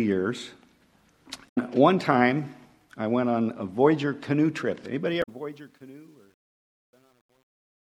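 At 1.45 to 1.58 s a short glitch breaks through the audio. This is damaged data in a compressed stream: a stretch of the encoded bytes is wrong, so the decoder misreads those frames, loses sync and has to hunt for the next valid frame header before playback settles again. A second, briefer blip of the same kind follows at 5.19 to 5.29 s, right after the closing fade has begun.

From 5.07 s to the end at 7.83 s, the fade-out that starts around 5 s grows gritty instead of thinning out cleanly. From 5.50 s onward the grit is at its worst. This is truncation distortion on a fade. The gain stage drops the low-order bits without dither, which fits a 10-bit stage. As the level approaches the smallest step, the waveform collapses into a few coarse square steps.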